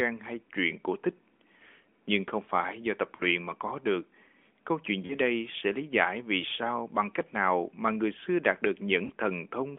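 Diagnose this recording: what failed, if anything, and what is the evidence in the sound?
Lost AMR speech frames on the radio link: the decoder concealed each gap with faded repeats, giving brief warbling dips at 3.16–3.23 s after "không phải do tập", 5.06–5.15 s before "đây sẽ lý giải", and 9.06–9.12 s after "người xưa đạt được". Each gap is about 40 ms, which fits two 20 ms frames.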